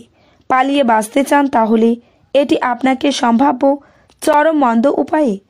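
At 2.33 s and again at 4.33 s, the sound drops out for about 8 ms and 7 ms with abrupt edges: a gap between stream segments. The timestamps of adjacent 2.0 s segments don't quite meet, so the player pads the shortfall with silence, delaying rather than deleting audio.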